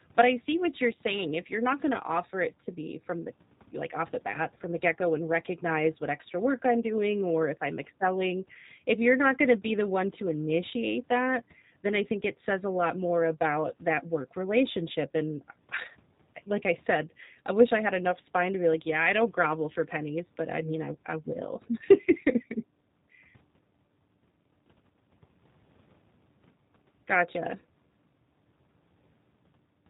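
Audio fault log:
throughout G.729 codec: the speech sounds plainly rough and synthetic with no content above 4 kHz, because each 10 ms frame is resynthesised from a vocal-tract model, pitch prediction and sparse pulses, which fits G.729A at 8 kbit/s.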